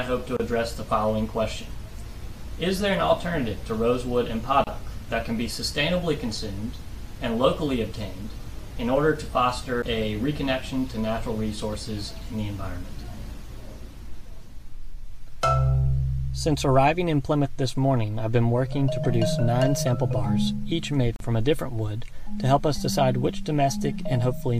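The audio has three short silences from a gap at a join of encoded pieces, at 0.37 s (31 ms), 4.64 s (30 ms) and 21.16 s (41 ms). Each comes from separately encoded pieces joined without trimming their start delay and end padding, and the sound resumes exactly where it stopped. At 9.82 s a CD skip gives a brief mute of about 10 ms, after which playback continues from a different point on the disc, forward or back by one or more turns of its spiral. That displacement, not the gap itself, separates it from the joins.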